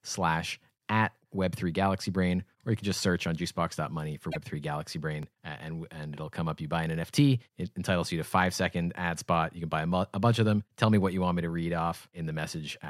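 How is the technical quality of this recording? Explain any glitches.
Two brief glitches interrupt the speech, both within a second of each other.

Broken MP3 bit reservoir, 4.31 to 4.36 s: For about 50 ms the speech jumps ahead and the gap comes out as a chirp, a burst of noise or a short hole. The likely cause is missing MP3 frames. Each frame here lasts about 24 ms, and frames draw on leftover space in earlier ones. After the cut, the next frames reach back for their data and decode bytes from the wrong frame. Roughly two frames come out as garbage before decoding recovers.

Repeated buffer, 5.23 s: A tiny piece of audio plays twice in a row with a hard join, heard as a click or brief buzz rather than a stutter. The repeated piece is only about 1.45 ms long, which fits a 64-sample buffer. When fresh audio failed to arrive in time, the playback device sent the previous buffer out a second time. 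Practically nothing of the speech is lost. The sound is simply doubled for that instant.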